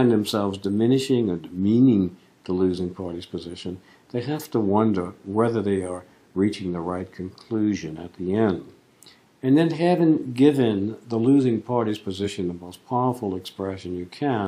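At 12.24 to 12.29 s the audio lurches forward, losing roughly a twentieth of a second. This is a case of compressed frames skipped: about one whole frame of the compressed stream, around 46.4 ms long, was never played because it was missing or rejected by the decoder as damaged.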